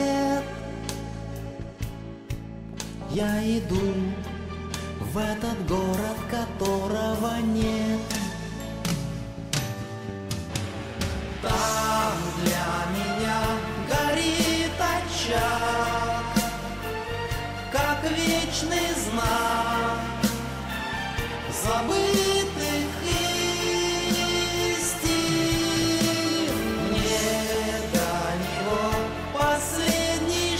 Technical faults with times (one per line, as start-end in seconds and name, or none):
2.73-3.24 DAB burbling
25.73-25.95 DAB burbling
27.50-28.20 DAB burbling